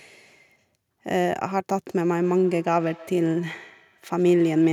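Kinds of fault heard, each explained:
Feedback echo between two devices: a second device in the room replays this microphone's signal, and the microphone captures it again, outside the reach of its own echo canceller. From 1.9 s to the end, the speech returns roughly every 150 ms, peaking about 24 dB below it.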